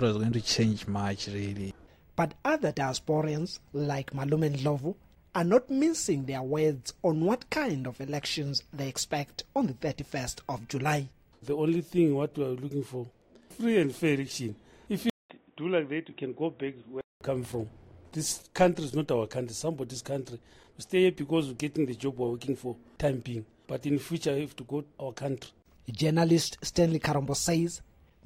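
At 15.10 s the sound goes quiet for 200 ms. It then comes back dull and boxy. Nothing reaches above 3.8 kHz. The level sits a few decibels lower, and a new background noise appears, well below the signal. This is likely an input switched to a poorer device, such as another microphone or a headset's call profile. That device passes a narrower band and adds its own tone and noise. At 17.21 s the fuller sound returns.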